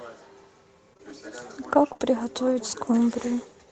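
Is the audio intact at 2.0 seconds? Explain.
No. At 1.93 to 1.97 s and again from 1.97 to 2.01 s, packets failed to arrive in time, so the decoder extended the preceding sound to cover each hole. This is short concealed packet loss, heard as a brief smear or wobble. Just before that, at 1.89 to 1.91 s, one lost packet was rebuilt from error correction: the decoder played a low-bitrate copy from the next packet, so there is no gap, but that moment sounds rougher and noisier.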